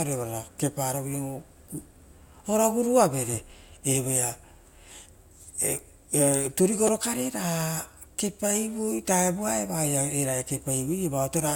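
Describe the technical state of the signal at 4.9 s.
At 4.9 s the signal is intact, with no audible technical fault at that point in the speech.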